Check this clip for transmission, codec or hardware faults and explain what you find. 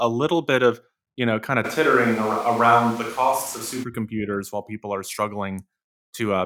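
One fault stands out, at the pickup rather than in transmission or the codec. From 1.66 to 3.82 s, after "you know kind of", the sound abruptly turns roomy and bass-light at a similar level, likely a switch to a distant microphone. The pickup sits further from the source and captures more room reflections. On the spectrogram this shows as thinner lows, reverberant smearing and a noise floor rising to about 25 dB below the speech, with sharp edges at both ends.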